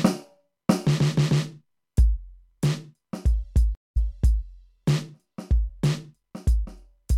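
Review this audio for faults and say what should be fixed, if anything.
A stream reconnect runs from 3.75 to 4.43 s. The music cuts to 180 ms of silence as the connection drops, then a fresh decoder resumes about 0.5 s earlier, repeating a stretch. A plain dropout loses material instead. A larger receive buffer with position-aware resumption would prevent it.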